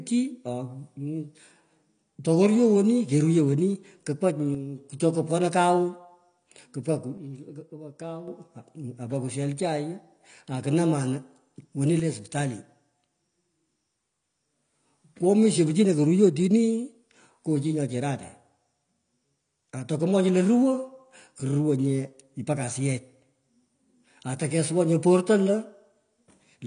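Throughout the clip the speech is band-limited, with nothing above 9.8 kHz, and carries plainly audible codec damage that leaves it dull and smeared. The likely cause is AAC compression, AAC-LC at a low rate, which fits about 32 kbps.

At 4.55 to 4.78 s, 7.18 to 8.28 s and 12.00 to 12.35 s the level drops abruptly by about 6 dB and then returns. The likely cause is one channel dropping out of an identical stereo pair, halving the mono sum.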